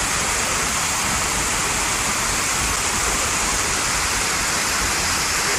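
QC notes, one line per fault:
2.76 s CD skip. A tick and a mute of a few milliseconds. The laser jumped to another spiral turn, so the sound resumes elsewhere.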